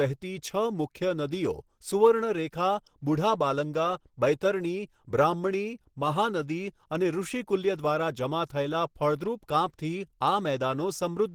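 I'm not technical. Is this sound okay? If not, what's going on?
No. From start to finish the speech has a rough, grainy, hoarse quality, as if the voice were being pushed through a fine sieve. That points to Opus compression, likely used at a low setting. To save space, Opus rebuilds parts of the sound it can't afford to store exactly, filling them with copied or noise-like detail. At this level it switches to a mode built for speech, which gives the roughness and hoarseness heard throughout.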